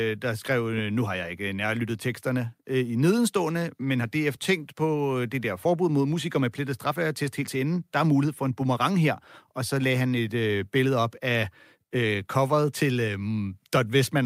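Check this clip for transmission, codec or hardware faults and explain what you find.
Nothing stood out on listening to the speech in this clip; no transmission, codec or hardware problem could be heard at any point.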